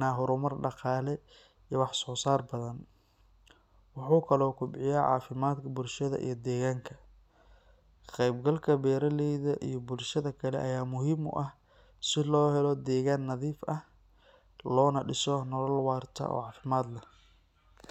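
No technical faults can be heard anywhere in the speech recording.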